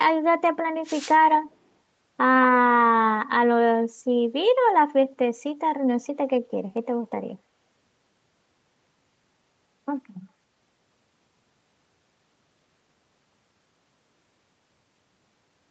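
From 0.83 to 1.17 s, a wireless microphone noise hit breaks through. It sounds like a short swish of static over the speech. The radio link of an analogue FM microphone faded here, as reflected signals cancelled the direct one. With the carrier weakened, receiver noise rose. The burst lasts about a third of a second and then clears.

Soon after, from 1.34 to 1.56 s, a faint delayed copy of the speech appears. It trails the original by 216 ms and sits well below it, roughly 10 dB down. The likely cause is an echo leak. The far side played the call on a loudspeaker, and its echo canceller did not fully remove what its microphone picked up, so part of that sound was returned down the line. Like the rest of the call audio, this scrap tops out at 8 kHz.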